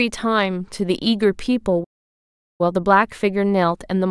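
At 1.83 s the speech just cuts out and stays silent until about 2.61 s, so you get roughly three-quarters of a second of dead air, around 755 ms, right in the middle of the flow. That's a playback stall: the output simply had nothing to play for that stretch, most likely because the player's buffer ran dry or its thread got held up, and then the speech carries on once it recovers.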